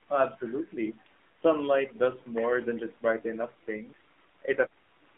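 From start to finish the speech runs through an AMR narrowband mobile codec, squeezed into roughly 250 Hz to 3.6 kHz, with buzzy, synthetic vocal texture pointing to a low bitrate around 7.4 kbps.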